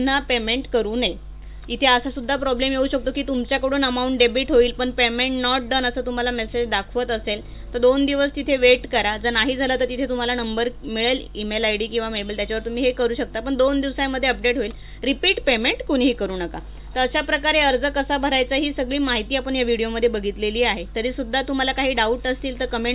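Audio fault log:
No faults detected on listening; nothing to log.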